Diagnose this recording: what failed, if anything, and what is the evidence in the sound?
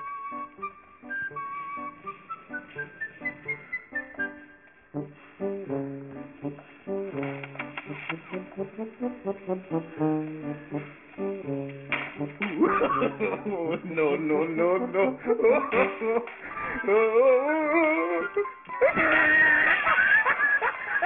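The fault sits in sample-rate conversion: the audio was decimated without an anti-aliasing filter, and the fold point around 3 kHz fits a drop to a 6 kHz rate. This aliasing runs through the whole recording. Content that was above 3 kHz has not been removed. It is mirrored back below that line as pitches with no musical or acoustic relation to the source, roughly 15 dB under the main signal. The high end sounds gritty and metallic, and the spectrum stays dense right up to 3 kHz.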